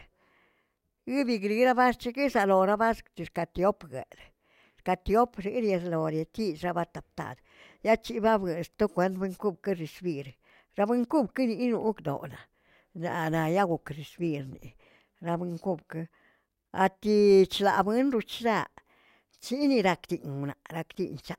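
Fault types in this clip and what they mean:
No technical fault can be heard anywhere in the speech. Nothing in the recording calls for a fault entry.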